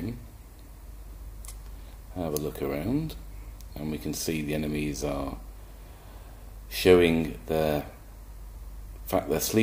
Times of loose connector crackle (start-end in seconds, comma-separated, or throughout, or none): none